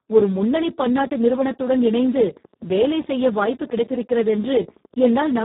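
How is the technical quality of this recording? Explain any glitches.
The technical quality is poor. Heavy codec damage runs through the whole speech clip, and a regular train of clicks is laid over most of it.

Speex codec, throughout: The speech sounds hoarse, noisy and close to robotic, which points to Speex at a very low setting, around 4 kbps. At that rate the CELP coder has too few bits to describe the excitation, so the voicing is replaced by a coarse approximation. The band is also cut off, with nothing above 3.8 kHz. On a spectrogram, the harmonics look smeared and grainy, and the energy stops sharply at that ceiling.

Train of clicks, 1.12 to 5.36 s: About fifty sharp pulses of much the same shape tick over the audio at a steady 12.1 per second. They are roughly as loud as the speech itself and carry on through the pauses as well. The likely cause is electrical interference from nearby equipment or a faulty connection or power supply injecting pulses into the signal. 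On a waveform, they show as evenly spaced narrow spikes. On a spectrogram, they appear as thin vertical lines running the full height of the band.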